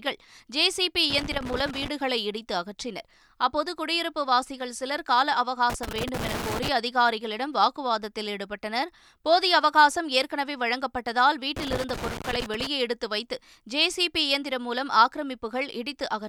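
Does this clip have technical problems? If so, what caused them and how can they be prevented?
Yes. Loose connector crackle bursts through the speech at 1.10–1.88 s, 5.70–6.69 s and 11.56–12.67 s, as a worn or dirty contact intermittently breaks the signal path. Reseat, clean or replace the cable and connectors, and secure the cable so it cannot move.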